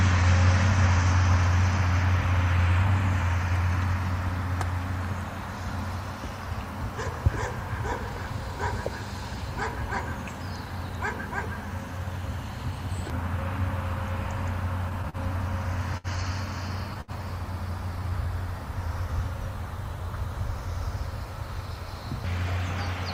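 Three short stalls from a late packet appear at 15.09 s, 15.97 s and 17.01 s. Each time, a packet arrived behind schedule, the jitter buffer ran dry, and the receiver held the last sound for about 39 ms, 67 ms and 69 ms before resuming exactly where it left off, with nothing lost. On a spectrogram these show as brief frozen, horizontally smeared bands; the waveform shows a flat, repetitive stretch.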